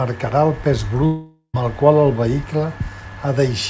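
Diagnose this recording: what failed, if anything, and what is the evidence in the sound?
The network stage failed, likely through a long network dropout. After "el pes", from 1.06 to 1.56 s, the receiver stretches the last sound into a fading buzz, then 0.08 s of silence. About 0.48 s is lost. Sound resumes at "el qual el vehicle".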